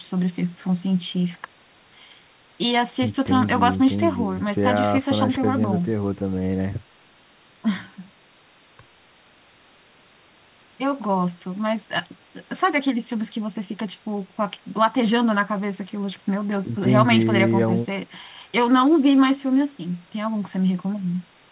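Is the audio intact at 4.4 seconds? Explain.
Yes, the speech is intact at 4.4 seconds, with nothing there beyond the narrow telephone-band sound of the call path, whose codec leaves nothing above 4 kHz.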